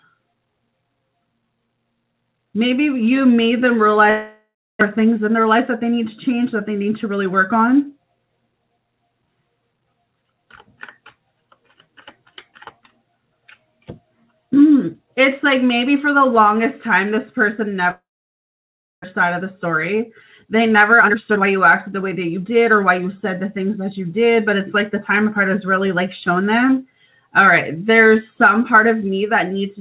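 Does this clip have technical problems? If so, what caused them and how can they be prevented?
Yes. A long network dropout occurs at 4.1 to 4.83 s and 17.91 to 19.06 s. The likely cause is that packets stopped arriving. The receiver stretches the last sound into a fading buzz, then leaves silence for about 0.29 s and 0.99 s respectively, and the audio resumes with the lost stretch missing. A steadier network path with less congestion and forward error correction would help prevent this.

A jitter buffer speed-up occurs at 6.81 to 7.34 s (108% speed), 19.24 to 20.03 s (105%), and 20.45 to 23.0 s (118%, trimming around half a second). The buffer held too much delayed audio, so the receiver cut out short pitch-period slices, hurrying the sound without changing its pitch. Reducing bursty packet delay keeps the buffer near its target.

Throughout, nothing is heard above 4 kHz, which fits a 64 kbps G.711 A-law call path.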